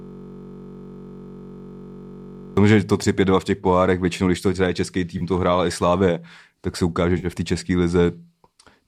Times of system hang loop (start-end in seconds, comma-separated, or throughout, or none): 0.00-2.57